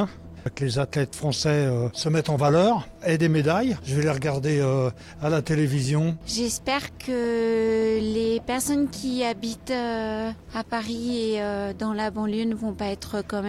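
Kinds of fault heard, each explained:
No faults can be heard anywhere in this recording.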